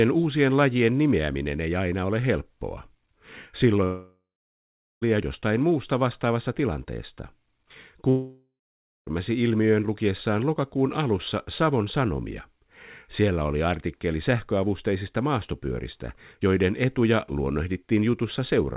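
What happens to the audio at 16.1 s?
At 16.1 s the speech plays through intact with no fault, carried over the call path with its narrowband G.711 A-law sound and nothing above 4 kHz.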